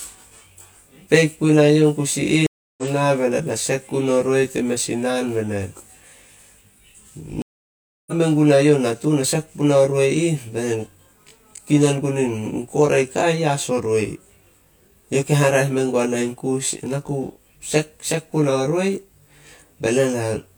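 Channel delay (comb filtering) runs through the whole speech clip: one channel lags the other by around 20 ms, and summing them to mono cancels shared content at evenly spaced frequencies starting near 30 Hz, leaving the voice rough and slightly doubled throughout.

Stream reconnects occur at 2.47–2.83 s and 7.42–8.13 s. The connection dropped, the player fell silent for 0.31 s and then 0.65 s, and a fresh decoder picked up mid-stream, so speech resumes with roughly 300 ms and about half a second skipped ahead respectively.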